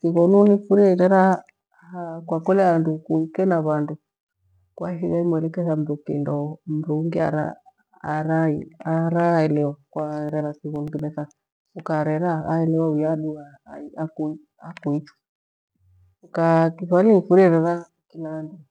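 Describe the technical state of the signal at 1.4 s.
At 1.4 s the speech signal is intact, with no dropout, clipping, glitch or other technical fault audible at that point.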